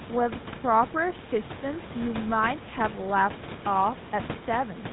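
From start to finish the speech carries GSM full-rate codec damage, plainly audible as a buzzy, gravelly roughness, consistent with the 13 kbps GSM full-rate codec. A spectrogram shows a hard ceiling at 4 kHz, with coarse, grainy harmonics beneath, and the room noise sits about 16 dB under the speech.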